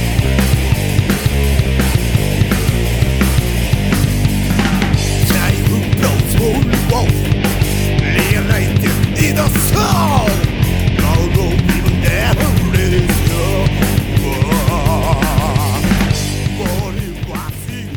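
Nothing goes wrong anywhere in this audio, so there's no fault to point to at any moment.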